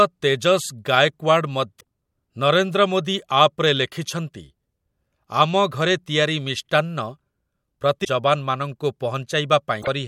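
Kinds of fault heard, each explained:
Damaged data in a compressed stream: corrupted bytes in the encoded speech make the decoder misread frames and lose sync while it hunts for the next valid header. This produces brief chirps or squawks at 1.77–1.83 s, 8.01–8.06 s and 9.78–9.88 s, each lasting under a tenth of a second.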